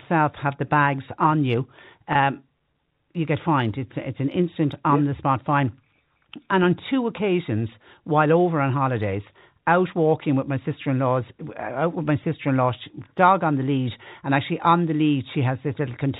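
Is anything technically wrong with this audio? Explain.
Yes. From 2.13 to 2.15 s, just after "the bags on you", there is packet loss with pitch repetition. About 20 ms of the stream went missing, which fits two dropped packets. The receiver filled the hole by repeating the last pitch period it had received, rather than leaving silence. Because the gap is so short, the repetition has no time to fade out. It comes across as a brief held, slightly buzzy tone before the speech resumes over the G.711 telephone path.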